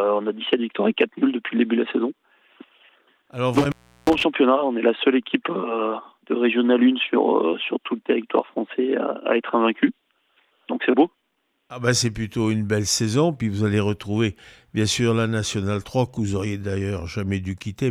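A loose connection in the signal path opens and closes between 3.56 and 4.24 s, an intermittent contact. The line stays broken for about 0.35 s in total, so the sound cuts out with crackle where contact breaks and remakes, leaving faint hiss during the gaps.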